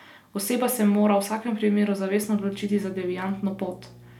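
A ground loop or a nearby transformer has coupled the power line into the signal path of this speech clip partway through, introducing mains hum from 2.36 s to the end. The hum sits at 60 Hz, pointing to a North American-style supply, and arrives as a steady low drone beneath the speech, roughly 25 dB below it. That makes it quiet but constant.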